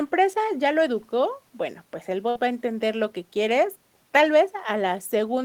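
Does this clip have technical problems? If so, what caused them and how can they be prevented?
Yes. A burst of packet loss occurs at 2.29 to 2.37 s. Consecutive packets were lost or arrived too late, so the receiver stretched and faded the last sound for 58 ms, then resumed with 60 ms of speech skipped. Forward error correction and a larger jitter buffer would prevent this.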